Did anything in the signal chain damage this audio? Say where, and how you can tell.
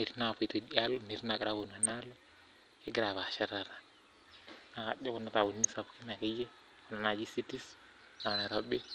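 Yes, at the codec stage. The speech is dull throughout, with the top end missing and a gurgling, granular roughness on everything that remains. That points to a low-rate sub-band codec, likely MP2 compression at a rate that fits roughly 80 kbps. Too few bits meant whole upper sub-bands were dropped and the surviving ones were quantised coarsely, and the bands flickering in and out give the speech that grainy texture.

There is also a processing fault in the driver or buffer stage: a filter restarted on every block. A steady buzz at 46.9 Hz runs under the whole clip and grows and shrinks with the speech level. That repeat rate fits 1024-sample blocks. Because the filter discards its state and starts each block from silence, every block boundary gets a small transient, and at this rate those transients fuse into a level-following buzz.

The reception stage adds DAB burbling in two bursts, from 1.69 to 1.97 s and from 5.41 to 5.65 s. 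In both, short blips of noise sit over the speech. The pattern suggests around a dozen damaged frames in the first burst and ten in the second, with a bit error rate of a few tenths of a percent. Errors got past the error correction into the MP2 stream. The corrupted samples put short blips of noise into single sub-bands.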